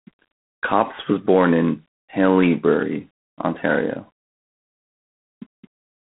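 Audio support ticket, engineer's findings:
G.726 ADPCM at low rate, whole clip. Encoder quantising prediction error too coarsely, about 3 bits a sample, consistent with 24 kbit/s. Result: harsh rasping hiss riding the speech level, plainly audible. Telephone band roughly 200 Hz to 3.6 kHz, nothing above 3.8 kHz. Probable component: narrowband codec stage on the line.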